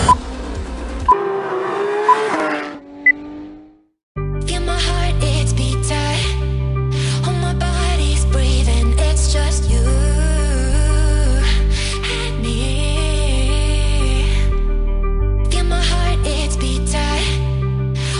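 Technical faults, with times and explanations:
No technical faults detected.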